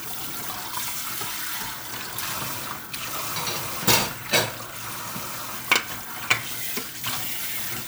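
No faults detected anywhere in the recording.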